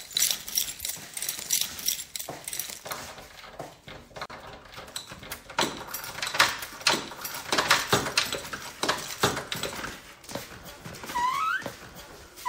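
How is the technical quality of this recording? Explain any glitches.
Two faults affect the recording.

A doubled audio track runs throughout. A second full-band copy trails the original by about one and a half seconds, at roughly the same level. It is dry, with no decay. The likely cause is a second, slower capture path mixed in. Events repeat as a flat echo.

A gap at a join of encoded pieces opens from 4.26 to 4.30 s, lasting about 42 ms. Separately encoded segments were joined untrimmed, keeping encoder delay and end padding. Continuous sound drops out, then resumes where it stopped, with smeared edges.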